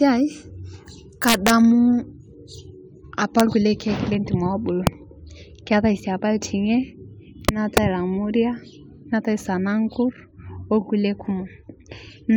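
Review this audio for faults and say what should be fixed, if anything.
There's integer overflow on the speech's loudest peaks: 1.28–1.50 s (pushed about 2 dB past full scale), 3.40 s before "lkulie keek lentim", 4.87 s after it, and 7.49–7.78 s before "lamuria neatai sanankur". The samples wrap to the opposite sign instead of stopping at the limit, so you hear hard cracks. The fix is to use saturating arithmetic, or to clamp after gain and summing, so overs clip rather than wrap.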